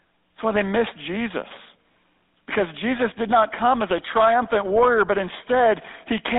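Throughout the recording the speech carries GSM full-rate codec damage, which is plainly audible. The coder rebuilds the voice from a vocal-tract model excited by sparse, regularly spaced pulses, consistent with 13 kbps full rate, giving a buzzy, gravelly texture inside a band of roughly 250 Hz to 3.7 kHz.

From 2.44 to 2.46 s there are lost GSM frames. The 20 ms dropout fits a single missing frame. The decoder held the previous frame's parameters, so the gap is filled with a brief rough, metallic ring rather than silence.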